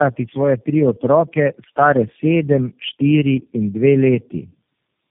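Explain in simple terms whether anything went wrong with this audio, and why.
Throughout the whole clip, the speech shows tandem speech coding: it passed through several different speech codecs in a row, each squeezing the already damaged output of the last. The result sounds rough, muffled and warbly, with nothing above 3.5 kHz.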